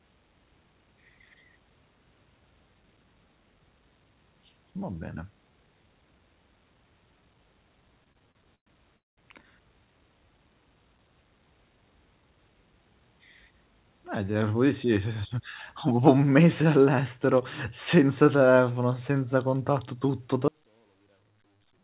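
A speech recording, carried over a call link that cuts everything above 4 kHz, which fits G.711 A-law at 64 kbps. From 8.04 to 8.97 s there are repeated stalls (stutter). Nine short gaps break the flow, the longest about 114 ms. The receiver fills them by stretching the last sound, about 251 ms in all, roughly a quarter of that span. Nothing is lost, but the speech drags and stutters. A call audio freeze follows at 8.97 s and lasts until 9.19 s. About 200 ms of silence is inserted. The speech then resumes exactly where it stopped, now running about 201 ms later. Packets were likely held up in transit, leaving the jitter buffer empty. At 20.48 s there is an audio dropout to a faint residue, lasting to the end. The speech cuts out abruptly, not as a fade. Only a faint trace remains, about 40 dB below normal level. The signal was likely lost while the path after the break stayed live.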